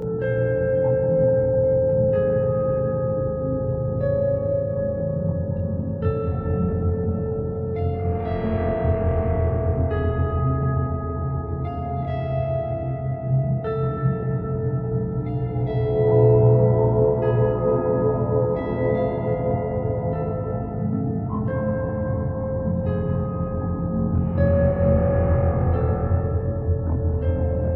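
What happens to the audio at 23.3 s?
At 23.3 s the sound has channel delay (comb filtering), which runs through the whole clip. One channel arrives about 20 ms late and is summed to mono. That cancels sound at evenly spaced notches, starting near 20 Hz. At this delay the result sounds rough or slightly doubled.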